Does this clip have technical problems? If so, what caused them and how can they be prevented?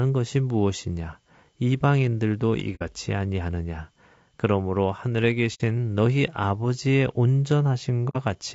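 Yes. Throughout this speech clip the voice sounds rough and grainy, with hiss filling the gaps between harmonics and a thin, synthetic top end. This is likely low-delay AAC compression (AAC-ELD) run at a low bitrate, about 32 kbps, whose short frames resolve pitch poorly. Raising the bitrate would prevent it.

There are also three brief soft-edged dropouts, at 2.75–2.82 s, 5.54–5.61 s and 8.09–8.17 s, where the sound fades out and back in. This is AAC frame loss with muting: each gap fits about two lost frames whose spectrum the decoder set to silence, with the overlapping windows smoothing the edges. A more reliable network path or packet-loss concealment would prevent it.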